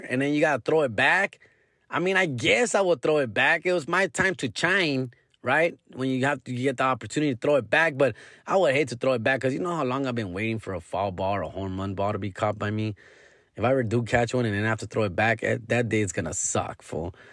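Speech clip where, from 4.35 to 8.4 s, a resampler restarted on every 50 ms block during a 48 kHz to 24 kHz conversion leaves a 20 Hz tick-buzz.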